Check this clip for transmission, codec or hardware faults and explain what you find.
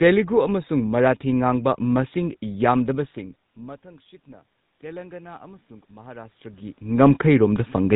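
Two faults are present: a GSM full-rate codec across the whole clip, and automatic gain rising from 3.14 s to near the end of the speech.

GSM full-rate codec, throughout: the speech has the buzzy, gravelly roughness of a vocal-tract model driven by a sparse, regularly spaced pulse excitation, and nothing passes above 3.8 kHz. The damage is plainly audible and fits 13 kbps full-rate GSM. Unlike a simple band limit, the grit is built into the voice itself.

Automatic gain rising, 3.14 to 7.91 s: the input level falls by about 24 dB near where the talker shifts position around 3 s. The gain control then slowly raises its gain by about 9 dB. Voice and room noise swell together, which distinguishes it from a talker simply coming closer, where only the voice would grow louder.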